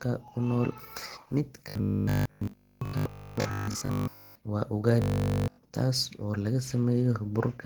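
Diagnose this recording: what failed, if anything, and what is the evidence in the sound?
The speech sounds muffled, hoarse and grainy throughout. This is likely Opus compression at a low rate near 16 kbps, with the codec working in its hybrid speech mode.

A rigid, metallic 50 Hz buzz is heard from 1.69 to 4.35 s and from 5.02 to 5.58 s. This is robotic sound from repeated short buffers, likely 20 ms blocks replayed.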